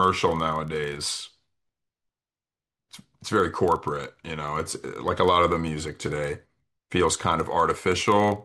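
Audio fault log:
Throughout, filter restarted on every block: each 40 ms block starts from silence, so a small tick repeats into a 25 Hz buzz that rises and falls with the speech level.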